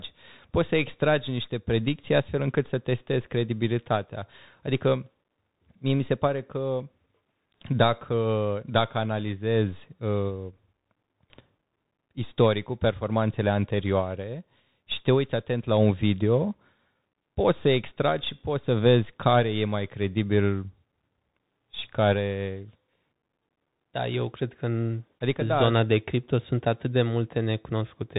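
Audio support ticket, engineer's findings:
Bluetooth CVSD headset codec, throughout. Band stops near 3.8 kHz; s sounds scratchy, granular hiss under speech, loud bright passages distort as the one-bit adaptive step falls behind. Points to a 64 kbps CVSD headset link.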